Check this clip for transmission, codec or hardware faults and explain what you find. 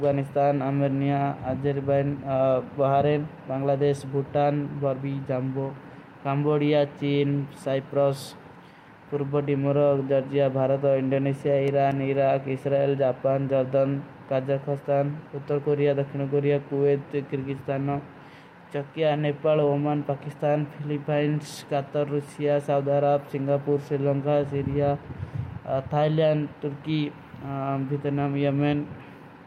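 One hardware fault is present: CD scratch ticks, running from 11.21 s to 12.38 s, just after "ପୁରୁପୋ ଦିମୁରୋଗ ଜର୍ଜିଯା ଭାରତ". A blemish on the disc corrupted more data than error correction could repair, once per revolution, forcing the player to patch or silence the damaged samples each time. The result is six short ticks across a little over a second, about five per second. The longest lasts only a few milliseconds, briefly nicking the speech.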